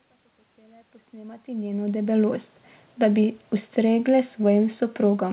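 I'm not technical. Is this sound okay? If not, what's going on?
Yes, it's fine: the speech eases in with a gentle fade that finishes around 2.2 s, and it has the narrow, phone-call sound you'd expect from audio sent over a call line, with nothing above about 4 kHz.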